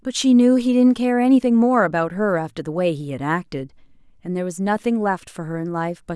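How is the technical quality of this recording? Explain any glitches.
No glitches can be heard anywhere in the recording. The speech runs without any technical fault to explain.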